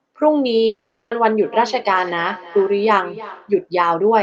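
A long network dropout runs from 0.66 to 1.12 s: the speech stops, and the receiver stretches the last sound into a fading buzz for most of that gap before a brief silence. This was likely caused by packets failing to arrive, and the missing speech never returns.

Feedback echo between two devices follows from 1.42 to 3.63 s. A second device in the room replays the speech into a microphone, so each syllable comes back about a third of a second later, thin and ringing, at about 16 dB below the speech.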